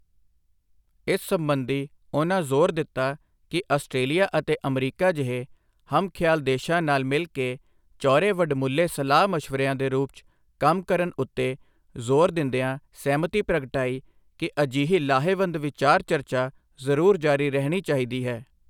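The speech recording has no audible technical faults at any point.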